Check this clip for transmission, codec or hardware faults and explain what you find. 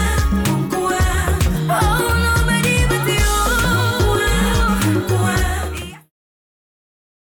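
I find no transmission, codec or hardware faults in this clip, and the smooth fade-out from around 5 s to 6.12 s is an ordinary editing fade.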